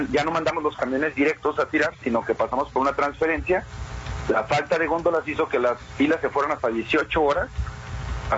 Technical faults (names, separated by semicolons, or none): gain pumping